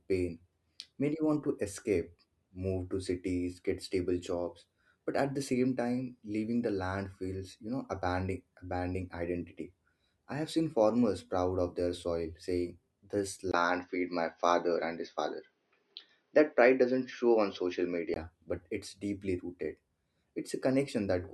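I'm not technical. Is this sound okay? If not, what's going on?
No. From about 13.5 to 18.2 seconds, the recording's input was likely switched to a poorer device, such as a different microphone or a headset. For those few seconds the speech sounds duller and more boxy, because nothing above about 6.3 kHz gets through. The loudness shifts a little, a faint new background noise appears, and a tiny gap of silence marks the switch. Afterwards the sound returns to its earlier clarity.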